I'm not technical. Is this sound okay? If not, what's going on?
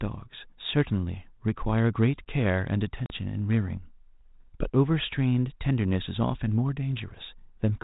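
No. There's packet loss on an ADPCM call at 3.06 to 3.23 s. About 40 ms of speech, probably two packets, vanishes into a sudden silent gap. Afterwards the phone's decoder has lost track of its running estimate of the sound, so speech comes back slightly distorted before settling.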